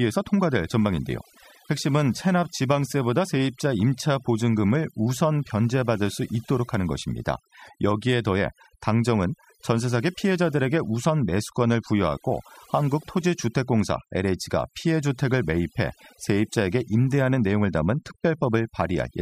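Overdone noise removal runs through the whole recording. A noise reduction stage was pushed too hard, so any frequency band sitting close to its estimate of the background noise gets pulled far down or switched off entirely. Quieter parts of the speech fall below that line and are removed along with the noise, leaving near silence between phrases scattered with twinkling specks.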